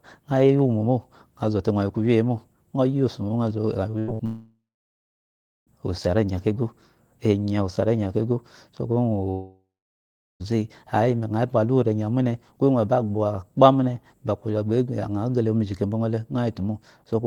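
At 3.91 to 3.95 s a short concealed packet loss fills about 20 ms of missing speech with a continuation of the preceding sound. It is heard as a brief smear rather than a gap.

Two bursts of packet loss follow, at 3.99 to 4.10 s (about 80 ms lost) and 4.14 to 4.21 s (about 60 ms). Each is longer than that smear. The receiver stretches the last sound into a fading buzz or hiss, and the speech resumes with a piece missing.

From 4.25 to 5.69 s the sound thins into a fading tail and then roughly a second of silence, before returning at "osu ari enya kego". The same happens from 9.31 to 10.42 s, with about 0.76 s of silence. These are likely long network dropouts. They differ from the bursts because the concealment dies away into real silence instead of bridging straight back to speech.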